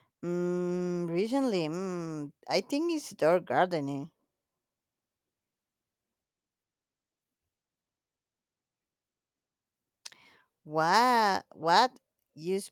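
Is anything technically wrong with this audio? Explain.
No, nothing technically wrong can be heard in this speech recording. There is no fault to point to at any moment in the clip.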